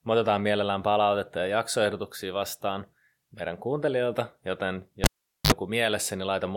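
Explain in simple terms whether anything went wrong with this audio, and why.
The cable was pulled and plugged in while live, right after "meidän kuuntelijoilta joten": a pop at 5.04 s, near silence, a brief 50 Hz mains buzz, then another pop at 5.52 s.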